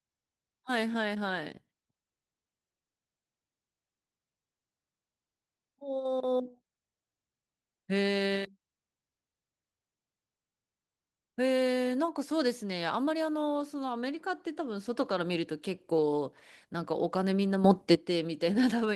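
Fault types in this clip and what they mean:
Sudden gain jump: at 17.64 s the speech and its background noise step up together by about 10 dB and drop back at 17.95 s, likely an unramped digital gain change. The waveform envelope shows a square step, and the spectrogram brightens uniformly across all frequencies.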